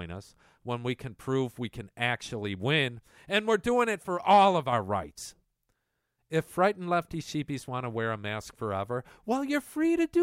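A speech recording with nothing technically wrong with it.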